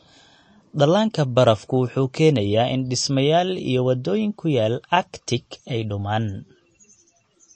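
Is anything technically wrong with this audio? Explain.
Yes. Throughout the speech there is plainly audible MP3 compression damage, likely from a low-bitrate encode. Nothing is heard above 8.4 kHz. The encoder has cut the treble at that point to save bits. Weak frequency lines also drop in and out from one frame to the next. That gives the sound a watery, swirly texture, and s sounds turn metallic and chirpy. The amount of damage points to a bitrate around 34 kbps.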